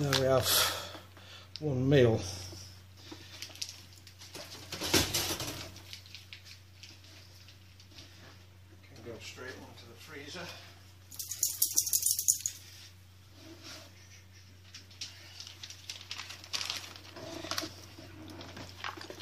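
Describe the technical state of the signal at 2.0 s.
At 2.0 s the signal is intact, with no audible technical fault at that moment.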